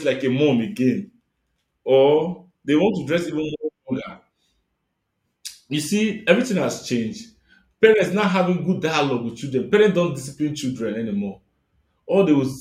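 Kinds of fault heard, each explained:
No technical faults are audible.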